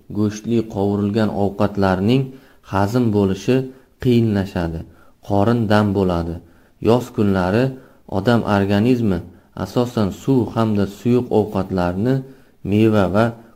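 No technical faults can be heard anywhere in the sound; the signal stays steady and intact throughout.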